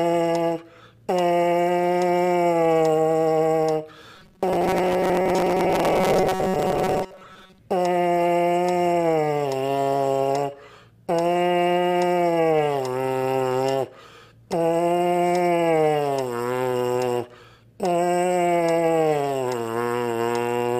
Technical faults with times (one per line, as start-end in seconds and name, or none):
4.16-7.59 robotic sound from repeated short buffers